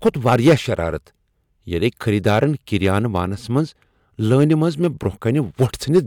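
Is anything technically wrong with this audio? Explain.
Yes. Hard clipping appears in this speech at 0.06–0.54 s, 2.27–3.20 s, 3.57–3.59 s, 4.33–5.06 s and 5.61–5.99 s. The level was driven past what a stage in the chain could pass, by about 8 dB in the first stretch, about 4 dB at 2.27 s and 5.61 s, about 2 dB at 4.33 s and about 1 dB in the brief event. The peaks are sheared flat, and those flat tops add high harmonics. The result is a harsh fuzz over the loud passages and a short crackle at 3.57 s.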